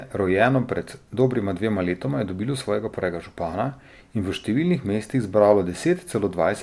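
Speech, no technical faults detected on this pass.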